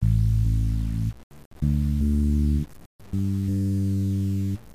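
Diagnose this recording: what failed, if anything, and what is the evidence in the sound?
The failure sits at sample-format conversion, and it runs through the whole clip. The sound is grainy from start to finish. The grit rises and falls with the signal instead of sitting as a steady hiss. Quiet passages turn rough rather than fading smoothly. The error lies only about 30 dB below the signal, which fits roughly 6 bits. The likely cause is low bit depth without dither, with samples truncated straight down.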